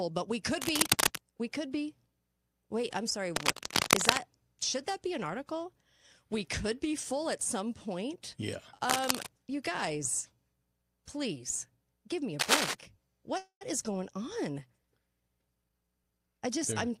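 A speech recording with three kinds of technical fault. Cable scratch noise, likely from a worn cable or connector being moved, lays dense, ragged rustling over the sound at 0.62–1.30 s (after "but we"), 3.35–4.20 s, 8.88–9.29 s (before "you guys") and 12.39–12.74 s (after "please give me a"). It runs about 5 dB above the speech, or level with it at 8.9 s, and is irregular friction noise rather than clean clicks. A call audio freeze at 13.37–13.63 s, likely from delayed packets emptying the jitter buffer, stretches the last sound into a fading buzz with roughly 100 ms of silence. The 235 ms gap is inserted, and the speech then resumes with nothing lost. A jitter buffer speed-up at 15.41–16.73 s plays the speech at 118% speed, cutting roughly 300 ms by removing pitch-period slices. The result sounds hurried, but unlike a resampled speed-up, the pitch stays unchanged.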